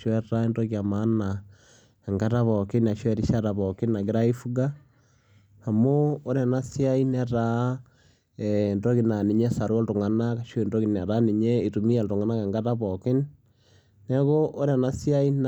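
No technical faults occur at any point in the speech, so there is nothing to describe in time order.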